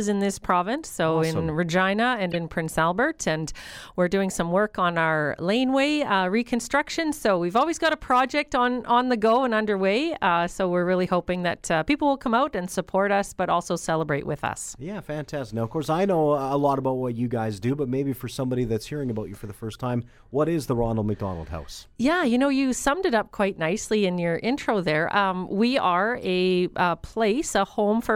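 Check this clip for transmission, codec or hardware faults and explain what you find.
Corrupt frames were decoded three times, at 2.31 to 2.36 s, 19.72 to 19.76 s and 26.24 to 26.28 s. Damaged compressed data was played anyway, so energy lands at wrong frequencies. Each is a brief chirp or blip. The first is loudest.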